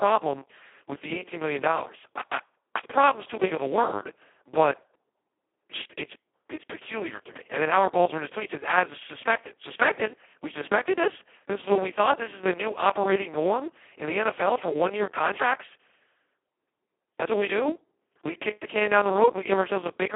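Throughout, heavy Speex codec damage makes the speech hoarse and robotic, which points to its lowest bitrate setting, with nothing above 3.7 kHz and a 300–3400 Hz phone-line band.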